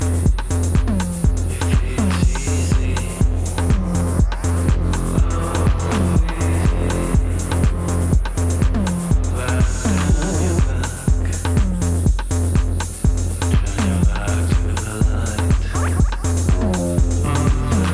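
No technical faults can be heard anywhere here.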